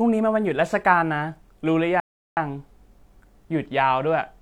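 A rebuffering stall interrupts the speech at 2.0 s and lasts until 2.37 s. The player used up the audio it had already downloaded and had to wait for more data before continuing. The speech drops abruptly into silence for about 0.37 s, then picks up exactly where it broke off. No sound is skipped or repeated; the gap simply adds 0.37 s of dead air to the timeline.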